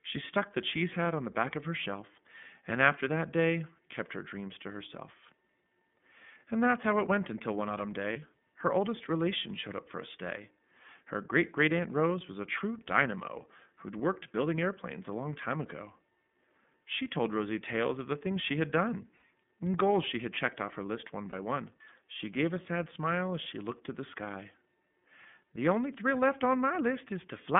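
Throughout, the speech passes through the iLBC codec, band-limited to 150 Hz to 3.5 kHz. The sound is rough and slightly synthetic, coded in 30 ms frames. Lost iLBC frames follow. At 8.12 s, after "went until one autumn", a dropped 30 ms frame becomes a brief buzzy hold. At 19.17 s, after "things she had done", two frames repeat the last pitch cycle. At 21.29 s, after "off her list one", one more frame does the same. Each recovers almost immediately.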